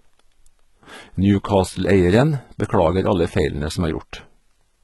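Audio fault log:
Throughout, HE-AAC compression: the speech sounds heavily processed, with sibilants turning gritty and metallic and nothing above 11.8 kHz. This is likely a very low bitrate, around 16 kbps, where the treble is rebuilt from copied lower bands whose harmonics fail to line up.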